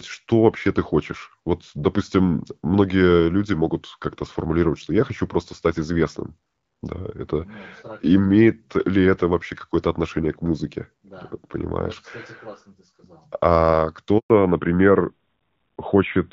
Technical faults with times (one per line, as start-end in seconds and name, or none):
14.18-14.30 handover gap
14.30-16.33 fallback to narrowband